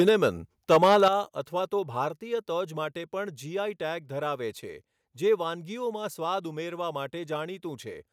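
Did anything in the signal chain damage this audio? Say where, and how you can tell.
Yes. Microphone overload is audible twice: a brief harsh crackle from 0.00 to 0.09 s, about 2 dB past full scale, and a longer, rougher stretch from 0.71 to 1.08 s, about 6 dB over, just before "અથવા તો". The peaks are flattened, with a small share of samples cut off at the converter's limit. This is most likely the input gain driving the converter into its limit. Unlike codec distortion, the damage follows loudness exactly rather than smearing across quiet passages.

The microphone volume stepped down right after each overload, by about 3 dB at 0.09 s and about 8 dB at 1.08 s, immediately before "અથવા તો". The drop is a single instant step, and the background falls with the voice. That points to call processing cutting the device's input gain after detecting clipping. A noise gate would duck only the pauses, and a normal gain control would ease the level down gradually rather than in one jump.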